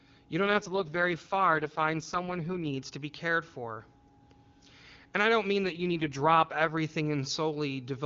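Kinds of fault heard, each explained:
AMR rate drop: Twice the speech turns rough, raspy and synthetic while keeping its full wideband top end and running without any gap, from 0.44 to 2.73 s, just before "to be cared for", and from 5.64 to 6.78 s, just after "I don't mean". The roughness fits AMR-WB falling from 23.85 to its lowest 6.6 kbit/s mode. Unchanged bandwidth and the absence of dropouts set it apart from a narrowband fallback or packet loss.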